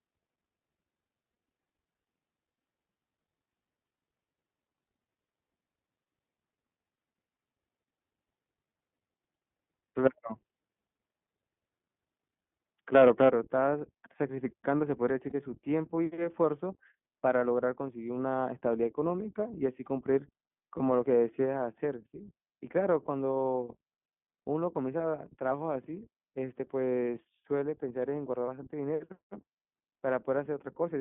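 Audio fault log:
throughout iLBC codec. The sound is narrowband, with nothing below about 150 Hz or above about 3.5 kHz. The damage is plainly audible: a rough, slightly synthetic texture on the voice. The codec rebuilds each short frame's excitation on its own, with no help from the frame before, so fine detail is lost. The grain fits iLBC's 15.2 kbps mode with 20 ms frames.
12.46–12.50, 15.30–15.32, 20.78–20.82, 24.98–25.00, 28.47–28.49 lost iLBC frames. Each gap is filled by a brief held, faintly buzzy vowel-like tone. The first gap lasts 40 ms, which fits two lost 20 ms frames. The others last 20 ms each, which fits one frame apiece. The decoder repeats the last pitch cycle mixed with noise. Because each frame stands alone, clean sound returns almost immediately after every gap.
12.95–13.29 microphone overload. The loudest peaks take on a harsh, crackling edge. Their tops are flattened, and the level pushes about 6 dB past the ceiling. 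A few percent of samples are cut off. The likely cause is a microphone input volume set too high, so the peaks hit the converter's limit. The flattened waveform adds buzzy distortion that sits on top of the sound.
13.29 microphone volume stepped down. Right after the distorted peaks, the whole level drops suddenly by about 7 dB. The background falls along with the main sound, and the change happens in a single step rather than a fade. This likely comes from call software reacting to the clipping and lowering the device's input volume at once. Because it happens as one step, the drop is audible as an abrupt change in loudness.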